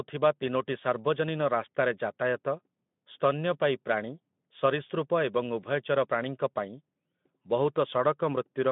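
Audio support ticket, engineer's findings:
No faults found in this audio.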